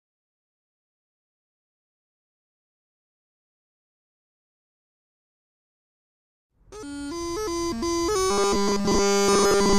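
From 8.30 s to the end at 9.78 s, the audio turns into robotic sound from repeated short buffers: a rigid 200 Hz buzz, likely from a 5 ms chunk looping throughout.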